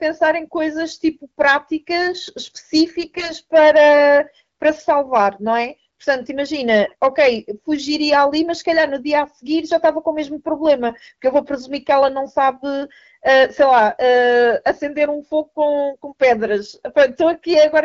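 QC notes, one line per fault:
3.00–3.31 s, AMR bit errors: the speech turns hoarse, scratchy and gargly but keeps roughly its pitch and level. About one in twenty of the weakly protected AMR-WB bits flipped across a dozen or so frames, misplacing excitation pulses and skewing pitch, gain and spectral detail.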